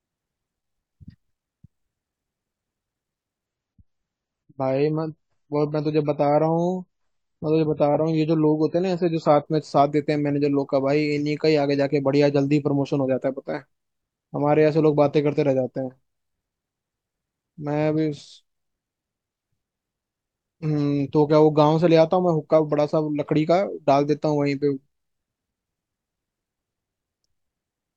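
From 3.46 to 9.46 s the adaptive stream drops to a lower bitrate: treble vanishes above about 7.6 kHz, artefacts thicken, then quality snaps back without any gap.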